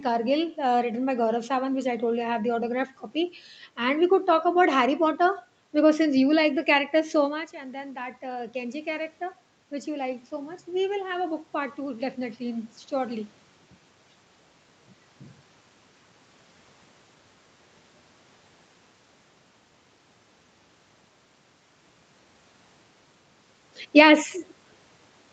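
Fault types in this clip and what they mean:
Automatic gain rising: the gain control reacts to an input level drop of about 12 dB by raising its gain slowly, by about 4 dB each time, so the speech and the room noise swell together instead of the speech alone. The first rise runs from 7.33 to 9.13 s, just after "like the character so", as the talker moves away from the microphone around 7.5 s. The second runs from 9.85 to 13.36 s.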